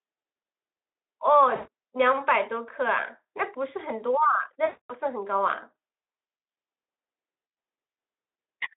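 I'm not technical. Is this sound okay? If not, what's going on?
No, there are two short glitches. At 1.55 to 1.68 s and again at 4.65 to 4.94 s, you'll hear VoIP packet loss concealed by the speech codec. Bits of the call went missing, so the decoder guessed by stretching the last sound, which turns buzzy or hissy and fades before the voice comes back.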